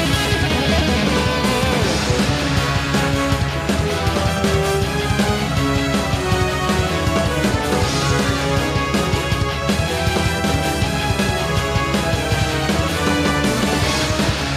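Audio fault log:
No technical faults can be heard anywhere in the signal.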